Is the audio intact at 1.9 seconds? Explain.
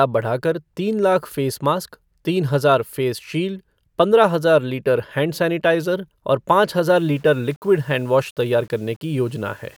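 Yes, the speech at 1.9 seconds plays through cleanly, with no dropout, click, distortion or other fault at that moment.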